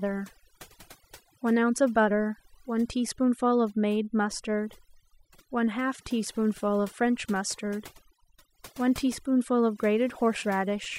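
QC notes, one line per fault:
Throughout: overdone noise removal. A noise reduction process was pushed far too hard on this speech, so it drops individual frequency bands down or out whenever they sit close to its idea of the noise floor. Quiet parts of the voice fall below that line and vanish with the noise, leaving near-silent gaps between phrases that twinkle with isolated specks. Unlike band-limiting, the damage shifts moment to moment across the spectrum.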